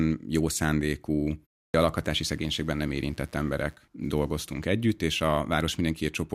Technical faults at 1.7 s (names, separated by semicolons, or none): clipped start after a pause